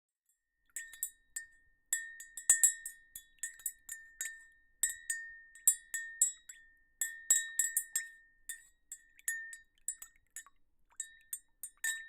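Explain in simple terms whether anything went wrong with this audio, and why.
The whole clip sounds hollow, due to channel delay (comb filtering): one side lags a split millisecond, cancelling tones near 5 kHz.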